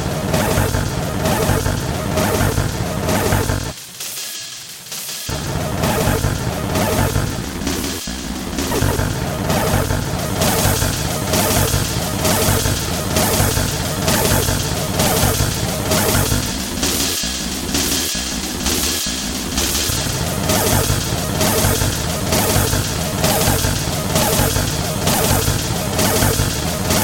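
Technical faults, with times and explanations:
Throughout, doubled audio track: every sound is followed by a second full-band copy at about equal level, roughly 150 ms behind, with no decay or room colouring. This is likely a second capture through a slower path mixed back with the original.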